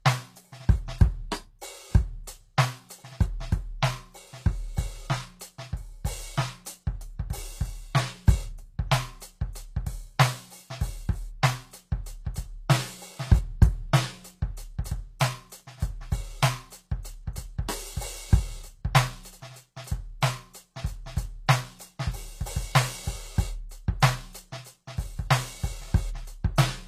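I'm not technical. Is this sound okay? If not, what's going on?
No. Throughout the music, the cymbals and other bright, hissy parts sound gritty and metallic, and nothing reaches above about 14.9 kHz. The likely cause is HE-AAC compression, which stores only the lower sounds and rebuilds the treble by copying them upward, so the top never quite matches.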